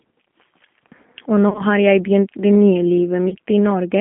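Throughout, the speech is confined to roughly 200 Hz to 3.4 kHz and carries a plainly audible rough, slightly synthetic edge. That is the G.729 codec, which fits an 8 kbit/s line, rebuilding each short frame from a vocal tract filter, a pitch predictor and a few pulses instead of the waveform itself.

From 1.49 to 1.63 s, and again from 3.29 to 3.35 s, the sound smears into a buzzy tone or coloured noise that fades. This is VoIP packet loss concealed by the speech codec: the decoder keeps extending its last pitch and filter at falling gain. In the first event, about 70 ms is lost in patches across 100 ms, the longest gap being 30 ms. The second loses 30 ms. Unlike a plain dropout, there is no silence or click, only stretched sound, and the speech stays weak for a moment after each gap.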